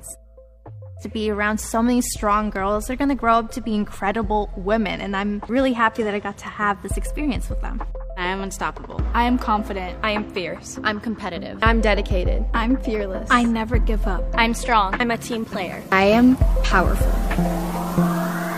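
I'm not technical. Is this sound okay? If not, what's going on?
Yes, this sound is okay, and there's nothing wrong going on in it.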